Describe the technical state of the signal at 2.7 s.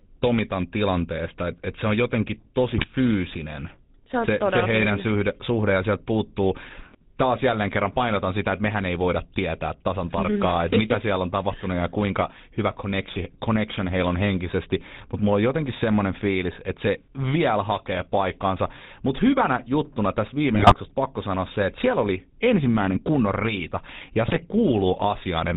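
At 2.72 s, just after "et se on jotenkin", GSM bit errors break the sound until 2.85 s. Corrupted filter, pitch and gain values in the decoder twist the spectrum and throw the level into a burst of squawks and gargling, which fits roughly four damaged frames. Unlike a dropout, the sound turns garbled rather than silent.

Underneath, the GSM full-rate codec is plainly audible. Its pulse-driven vocal-tract model gives the voice a buzzy, gravelly roughness, with nothing passed above 4 kHz, consistent with a 13 kbps stream. Unlike a plain low-pass filter, it adds grit as well as dullness.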